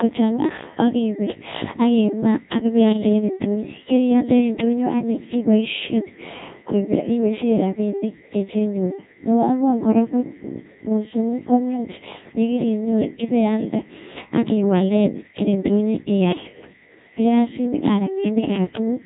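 Codec 2 vocoder damage runs through the whole of this speech clip, from the first second to the last. The sound has been reduced to a handful of parameters: pitch, voiced or unvoiced decisions, loudness and a coarse spectral outline. It has then been rebuilt from sine waves, so the original waveform is gone. The damage is heavy, with a robotic, buzzy texture and nothing above 3.8 kHz, which fits a very low rate of around 1.6 kbit/s.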